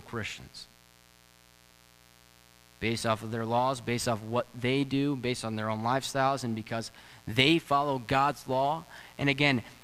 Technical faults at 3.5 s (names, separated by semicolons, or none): mains buzz